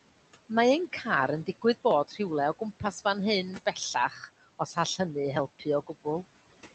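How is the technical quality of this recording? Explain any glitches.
The recording is marred by noise suppression: a steady processing artefact runs through the whole clip, and the suppressor clips the speech itself twice.

Noise suppressor artifacts are present from start to finish. The suppressor estimates the steady background and pulls those frequency bands down, by about 15 dB here, adjusting frame by frame. Because the gain keeps shifting, the leftover noise dips in the pauses and swells back under the speech. The voice sits within a band that stops near 8 kHz, which fits a wideband Opus call path.

Speech cut by the noise suppressor happens at 2.08 to 2.2 s and again at 3.94 to 4.29 s. In both spots the suppressor misjudged part of the speech as noise and turned it down along with the background, by up to about 11 dB in the first and about 8 dB in the second. The first loss is very brief, about a tenth of a second; the second touches roughly a fifth of a second. 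Soft sounds there come across as swallowed or faded.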